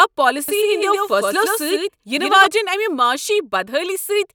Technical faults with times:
0.48-2.46 doubled audio track

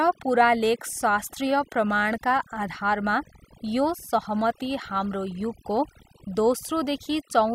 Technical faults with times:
0.00-7.54 overdone noise removal

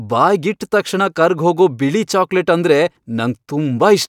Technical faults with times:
none

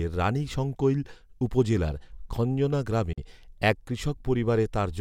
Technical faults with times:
3.13-3.18 Bluetooth dropout

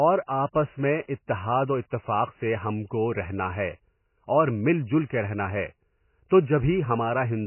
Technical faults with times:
0.00-7.46 MP3 compression

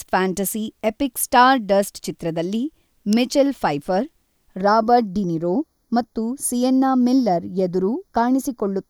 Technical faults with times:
3.13 electrical switching spike
4.61-8.89 channel delay (comb filtering)

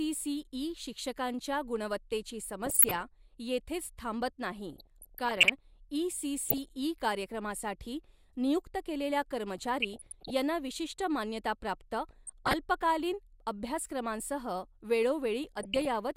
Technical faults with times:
2.65-3.01 DAB burbling
4.73-5.50 DAB burbling
6.46-6.70 DAB burbling
9.78-10.33 DAB burbling
12.11-12.54 DAB burbling
15.44-15.94 DAB burbling

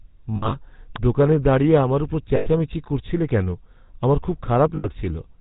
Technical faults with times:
0.00-5.41 GSM full-rate codec
0.36-0.55 lost GSM frames
0.96 electrical switching spike
2.36-2.48 lost GSM frames
4.76-4.87 lost GSM frames

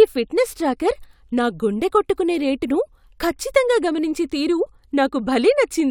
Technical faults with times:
none

